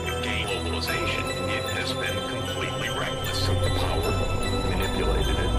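At 0.44 s the audio jumps forward by about 0.4 s with no pause: compressed frames skipped, likely because a run of about four frames was missing or rejected as damaged by the decoder. The jump is roughly a whole number of frames, which fits a frame length near 93 ms. Unlike a dropout, nothing goes silent.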